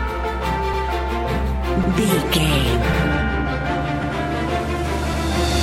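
A brief stutter, with a fragment of sound playing twice, occurs at 0.74 s, 2.94 s and 4.04 s. These are overlapping chunks: the audio was handled in 1.0 s blocks, and at these joins a block began 100 ms before the previous one ended.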